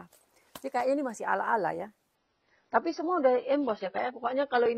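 At 2.15 s the adaptive stream switches to a lower bitrate and stays there to the end. Nothing above 6 kHz survives, so the top end turns dull and grainy, consistent with a step from roughly 96 to 16 kbit/s AAC. The switch is abrupt, with no gap.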